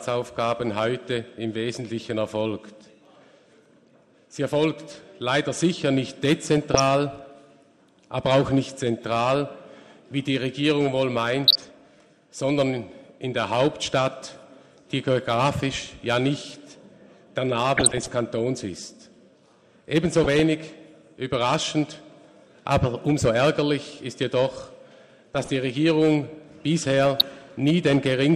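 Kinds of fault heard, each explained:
MP2 compression: The whole clip sounds dull, with a gurgling, granular texture as upper sub-bands switch in and out and the remaining bands are coarsely quantised. This is likely MPEG Layer II coding at a low rate, around 80 kbps.
DAB burbling: Short burbling bursts at 6.58, 11.47, 17.73, 20.24, 25.26 and 27.20 s, mostly 0.2 to 0.35 s long, the last about 30 ms. Bit errors slip past error correction and corrupt samples and scale factors, making single sub-bands jump in level.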